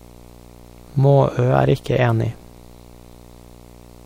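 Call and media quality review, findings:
Video or display buzz throughout the speech. Steady 60 Hz buzz with hash above it, roughly 25 dB below the speech. Probable component: screen or video cable near the audio path. Mechanism: the picture's field-rate signal couples into the audio wiring.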